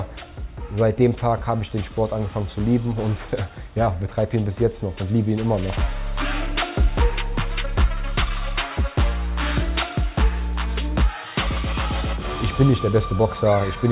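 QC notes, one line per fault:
No audible faults found anywhere in this clip.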